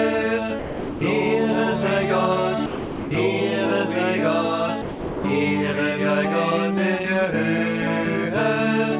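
At 0.59 s the sound gives way to steady noise for 0.42 s, until 1.01 s. It happens again from 2.66 to 3.11 s, for 0.45 s, and from 4.82 to 5.24 s, for 0.42 s. Each gap is likely sound dropped by the voice detector. The sender judged the audio to be background and stopped sending. The receiver filled the space with comfort noise. Throughout, nothing is heard above 4 kHz, which fits a narrowband call codec.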